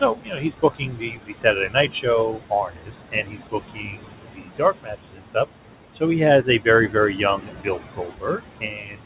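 Noise suppressor artifacts run through the whole clip. The suppressor pulls the room noise, which sits only about 9 dB below the speech, down by about 18 dB between phrases, then lets it back up under them. On a spectrogram the background shows as a mottled, flickering floor that darkens in gaps, with everything stopping at 4 kHz, consistent with a narrowband call codec such as G.711 A-law.

Speech cut by the noise suppressor happens at 0.01–1.45 s, 1.68–2.06 s, 2.32–2.93 s, 3.11–5.36 s, 6.43–6.66 s and 7.38–9.05 s. Here the suppressor mistakes quiet speech for noise and turns it down by about 14 to 19 dB, so endings and soft consonants sound swallowed. The first and fourth stretches lose roughly a second and a second and a half. The waveform shows syllable tails collapsing. The spectrogram shows faint, patchy energy where consonants should be.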